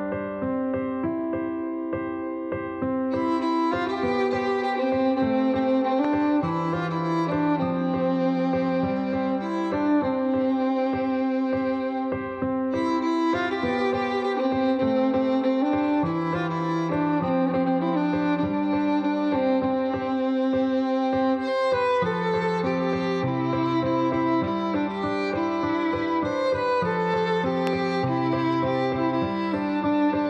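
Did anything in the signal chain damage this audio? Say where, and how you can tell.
Yes. Loud pops, likely from voltage steps entering the analogue wiring at a plug, switch or static discharge, are heard at 6.05–6.07 s and 27.67–27.69 s. Each is a single sharp pulse, about 10 dB and about 15 dB above the signal, with the sound continuing underneath.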